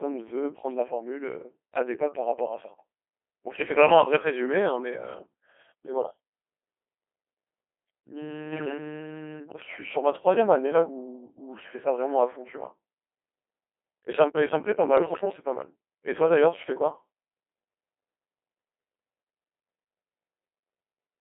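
Speech carried through the Codec 2 vocoder at a very low rate, which fits the 2.4 kbit/s mode. The decoder rebuilds the voice from sine waves using only pitch, voicing, level and spectral shape, so the result is robotic and buzzy, confined to roughly 300 Hz to 3.4 kHz, with heavy vocoder damage throughout. Bit errors on digital voice radio then corrupt the coded stream twice, from 8.52 to 8.78 s and from 14.98 to 15.25 s, each burst spanning roughly nine or ten frames at an error rate of a few percent. Because each flipped bit sets a whole frame's pitch, level or tone colour, the synthetic voice lurches and breaks into warbling, bleeping gibberish during those stretches.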